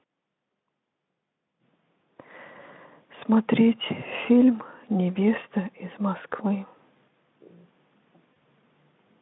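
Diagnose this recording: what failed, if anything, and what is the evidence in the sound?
The network stage failed briefly: VoIP packet loss concealed by the speech codec, at 8.34 to 8.37 s, near the end of the speech. The gap fits a single lost 20 ms frame. The Speex decoder carried its last pitch and spectral envelope forward at falling gain, so the sound smears into a short buzzy continuation. On a spectrogram the harmonics run flat and fade instead of moving, within the narrowband 150 Hz to 3.6 kHz line. The waveform shows a decaying repeated cycle.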